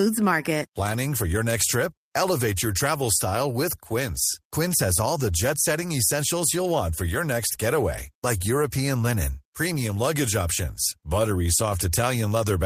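No technical faults are audible.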